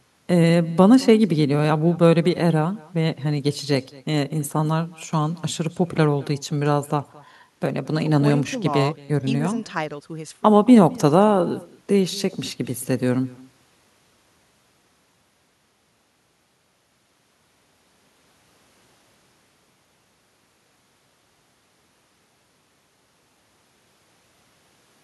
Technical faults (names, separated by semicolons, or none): echo with no canceller